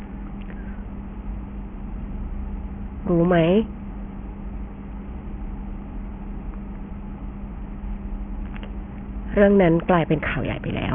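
A speech recording with aliasing across its whole length. Energy that originally sat above 3 kHz has folded back below that point instead of being removed, so sibilants come out gritty and metallic, with stray tones at pitches unrelated to the voice. The spectrum runs hard up to a 3 kHz ceiling, which points to a sample-rate reduction to about 6 kHz with no anti-alias filter. The folded components sit roughly 20 dB below the signal.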